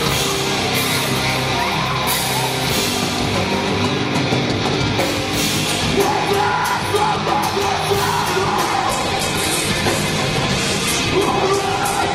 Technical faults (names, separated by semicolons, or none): adaptive stream at a lower bitrate